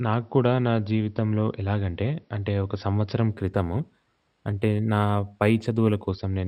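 A speech clip with imaging from linear upsampling from about 3.32 s to 6.09 s. Across that stretch the top end goes dull and a faint metallic shimmer rides on the sibilants. The first mirror image sits between 6 kHz and 12 kHz, roughly 35 dB below the signal, which fits a 12 kHz-rate source raised to 48 kHz by joining samples with straight lines. That interpolation filters too weakly to suppress those spectral copies.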